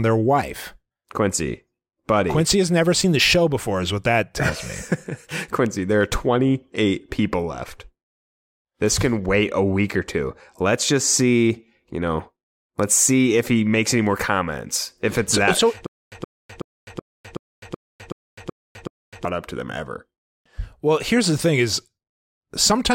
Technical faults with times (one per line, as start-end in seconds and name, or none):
15.86-19.25 stutter with silent gaps